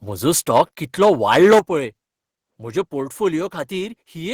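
From 0.55 to 0.62 s the loudest part of the speech is clipped, about 5 dB past full scale, with roughly a tenth of the samples flattened. That gives a brief harsh, crackling edge, most likely microphone overload, where input gain set too high drives peaks into the converter's limit. At 0.58 s, inside that burst, the level of speech and background together drops abruptly by about 2 dB. This is most likely the microphone volume being stepped down, the call software reacting to the clipping by lowering the device's input gain in a single jump. From 1.02 to 1.59 s a longer stretch overloads again, this time about 10 dB over, with around a tenth of samples cut flat, so the distortion is rougher and sustained. At 1.59 s, right as it ends, the whole signal falls by about 8 dB in one step, a second and much larger gain reduction.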